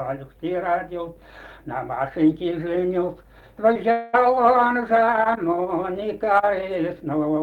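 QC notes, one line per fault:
3.73–3.77 s, short concealed packet loss: about 20 ms of audio never got to the decoder in time, so the receiver papered over it by carrying the last sound forward and blending back in. You hear a quick smear or wobble, and a brief sound can go missing.
3.91–4.15 s, long network dropout: the sound stalls and turns into a stretched buzz or hiss that fades over roughly 220 ms, most likely because nothing arrived over the network for that stretch. The receiver filled the whole gap, so it never drops to silence, then audio resumes without the lost part.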